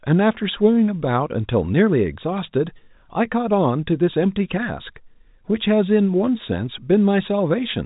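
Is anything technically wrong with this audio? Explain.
No, nothing technically wrong here.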